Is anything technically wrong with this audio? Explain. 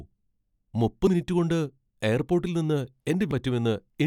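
Yes. Damaged data in a compressed stream at 1.07–1.10 s, just before "മിനിറ്റു കൊണ്ട് എയർപോട്ടിൽ നിന്ന്", and at 3.31–3.34 s, just after those same words. Corrupt bytes there made the decoder misread its frames and lose sync until the next valid header, leaving a brief chirp, squawk, click or short hole in the speech.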